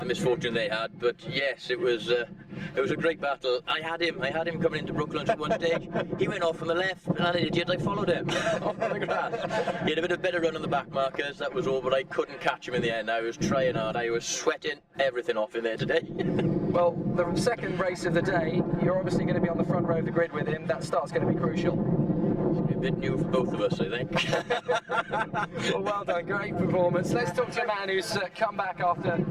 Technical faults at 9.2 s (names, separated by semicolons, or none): channel delay (comb filtering)